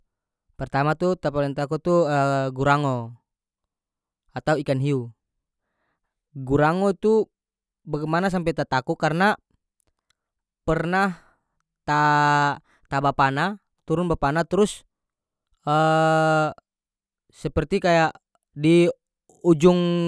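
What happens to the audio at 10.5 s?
At 10.5 s the speech carries on without any dropout, click, distortion or other audible fault.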